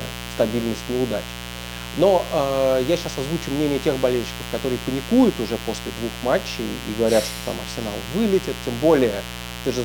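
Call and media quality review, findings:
Mains buzz, present throughout the speech. Steady raspy buzz on 60 Hz mains, high, roughly 10 dB below the speech. Sharp switching spikes twice per cycle from a dimmer, rectifier or unshielded path, with harmonics extending into several kHz.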